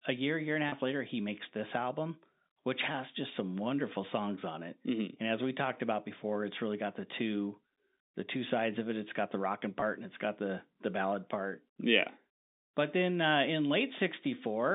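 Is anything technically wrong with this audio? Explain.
Yes. Twice, a brief buzzy, held sound fills a gap: at 0.69–0.72 s, after "year year and a" and before "later he makes this", and at 9.80–9.82 s, after "got the rocking" and before "and it's got the". This is packet loss with pitch repetition. About 30 ms and then 20 ms of audio went missing, and the receiver looped the last pitch period to cover each gap. The audio also has the narrow band of G.711 telephone coding, roughly 250 Hz to 3.7 kHz.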